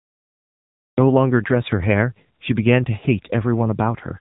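A cut-off start runs from 0.0 to 0.98 s. The recording began late, so there is digital silence and then the speech begins abruptly at 0.98 s, in the middle of a sound with no natural attack, as though a switch had been thrown.

The AMR narrowband mobile codec affects the whole clip. Nothing above 3.8 kHz survives, leaving the speech thin and boxed in. The plainly audible buzzy, synthetic texture comes from the vocal-tract model being driven by very few pulses per frame, which fits a low bitrate of around 8 kbps.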